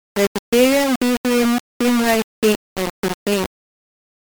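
From start to finish the speech sounds harsh and grainy, with gritty distortion that tracks the sound and quiet stretches sputtering away. The likely cause is low bit depth without dither, with around 3 bits rounded and error only about 10 dB below the signal.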